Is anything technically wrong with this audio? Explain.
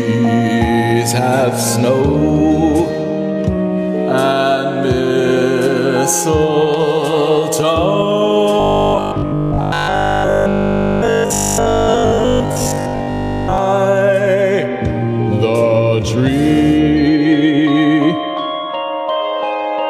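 Yes. Robotic sound from repeated short buffers runs from 8.60 to 13.58 s. The likely cause is new audio arriving too rarely, so playback fills the gaps by looping the most recent slice, which fits a 20 ms buffer. Most of that stretch, roughly seven-tenths, is repeated material rather than fresh audio. The looping imposes a rigid 50 Hz buzz, turning the sound metallic and mechanical while it still loosely tracks the original contour.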